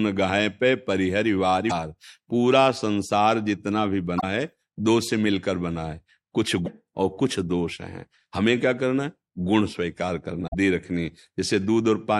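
Speech with short blips at 1.66–1.72 s, 4.17–4.24 s, 6.62–6.68 s and 10.44–10.55 s. These come from damaged data in a compressed stream: corrupted bytes make the decoder misread frames and lose sync until it finds the next valid frame header.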